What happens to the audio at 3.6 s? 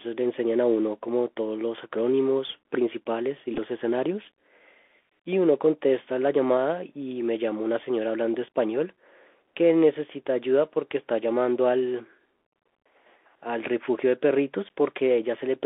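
Bluetooth headset packet repeats occur from 3.54 to 3.58 s. Lost packets were filled by decoding earlier packet bits again, giving short buzzy ticks, the longest run about 10 ms. Under this, the Bluetooth CVSD headset codec limits the speech to 300 Hz to 3.5 kHz. It adds granular hiss and makes s sounds scratchy.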